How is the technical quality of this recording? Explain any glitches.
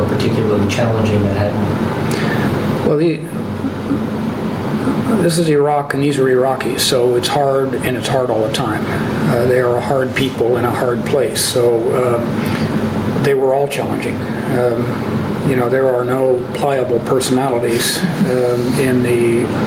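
The recording has a clear dynamics problem: gain pumping runs through the whole clip. The gain swings by around 10 dB, so loud and soft passages sit squashed close together in level. The likely cause is input gain set far too high, with a fast limiter or compressor clamping down on each peak and then releasing. Unlike a noise gate, this kind of limiting turns quiet parts up rather than cutting them to silence.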